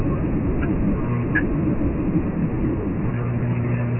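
Speech encoded with Dialogic VOX ADPCM, the 4-bit (OKI) coding used for phone menus and voicemail, throughout: nothing reaches above 3 kHz, which fits the 6,000-samples-a-second, 24 kbps variant, and heavy quantisation leaves a gritty hiss riding on the speech from start to finish.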